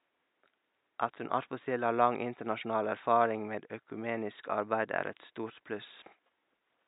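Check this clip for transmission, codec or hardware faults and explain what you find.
No faults found.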